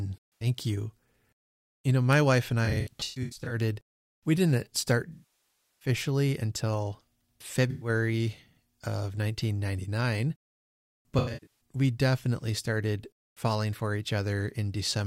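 Speech, with AAC frame loss and concealment in five places. Brief smeared, phasey patches fall at 0.35 to 0.47 s and 7.70 to 7.89 s. Choppy, scattered smeared patches run from 2.65 to 3.56 s after "know my wife and" and from 11.18 to 11.52 s before "we definitely started falling". After "we didn't start", 5.13 to 5.89 s decays toward silence. The decoder is refilling missing frames from the last good spectrum.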